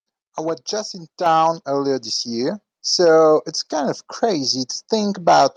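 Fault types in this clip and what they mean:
Microphone volume stepped up: the capture device's input gain jumps in one step, lifting speech and background noise together, by about 6 dB at 1.26 s and about 2 dB at 2.28 s; waveform amplitude and spectrogram brightness rise abruptly across all frequencies there.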